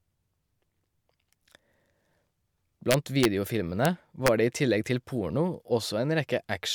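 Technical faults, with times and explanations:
2.91–3.25 s, 3.85 s and 4.27 s, integer overflow: loud speech peaks pushed past the largest integer value, by about 2 dB at most, and wrapped to the opposite sign instead of being limited, so each overshoot jumps across the full range as a violent crack, far sharper than clipping.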